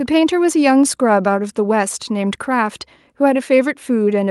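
Nothing in the speech stood out as a technical problem on listening.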